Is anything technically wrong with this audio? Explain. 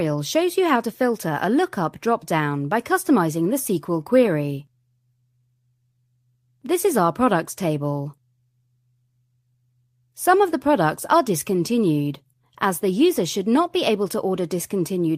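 No, nothing in this recording points to a technical problem with how the signal was captured, processed or transmitted.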